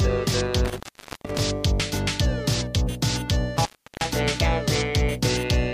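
Intermittent contact breaks the signal twice, from 0.65 to 1.40 s (open about 0.45 s) and from 3.57 to 4.09 s (about 0.36 s), as a loose connection momentarily separates. Each dropout leaves faint hiss bracketed by crackle, appearing as near-flat waveform gaps edged with vertical broadband spikes on a spectrogram.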